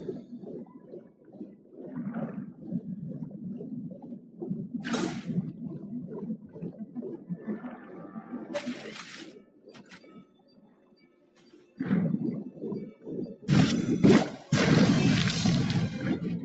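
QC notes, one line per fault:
Throughout: noise suppressor applied to music or sounds. A speech-tuned suppressor treats sustained material as noise, swinging gain by around 20 dB, so held sound pumps and thins.
0.65–1.8 s, 3.96–4.41 s, 6.37–6.98 s, 7.17–7.48 s, 7.65–8.35 s, 9.26–11.78 s: sound cut by the noise suppressor. Steady or decaying passages are pulled down by about 7 to 9 dB, so they sink and tails end early.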